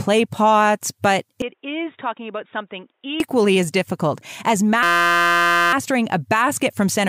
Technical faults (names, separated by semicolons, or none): input switched to a poorer device; system hang loop